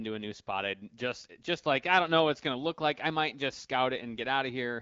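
Nothing here goes wrong: the speech comes through the AMR wideband (HD Voice) codec at 12.65 kbit/s with the usual light coding texture, and the top end stops short of 7.5 kHz as that path would have it.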